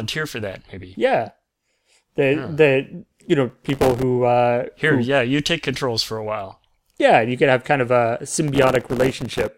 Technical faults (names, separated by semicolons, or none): processor overload crackle